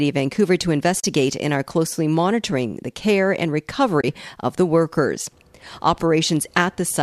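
Twice the stream dropped audio frames and the decoder zeroed their spectrum, an AAC frame loss with muting. The first loss runs from 1.00 to 1.04 s, about 40 ms, just before "and are closely monitoring". The second runs from 4.01 to 4.04 s, about 30 ms, between "monitoring the care and" and "of the workers". Overlapping windows fade each gap out and back in, so the speech drops into soft-edged holes. The speech likely runs over a low-delay AAC link, whose coding damage is light.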